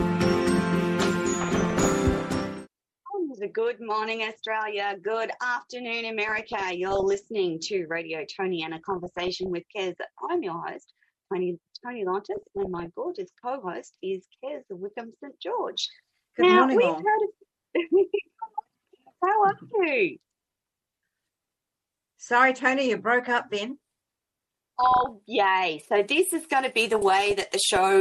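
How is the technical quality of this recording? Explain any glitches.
The recording is marred by repeated DAB burbling. It occurs at 1.40–2.41 s, 6.28–7.27 s, 8.61–9.51 s, 12.37–12.86 s, 24.80–25.09 s and 26.93–27.76 s. Weak reception let bit errors, around one percent at worst, slip past error correction into the MP2 data. Corrupted samples put short blips of noise in individual sub-bands, and corrupted scale factors make sub-bands leap in level for up to a frame. The heavier patches give a bubbling, squelchy chirping over the audio, the lighter ones a few watery blips.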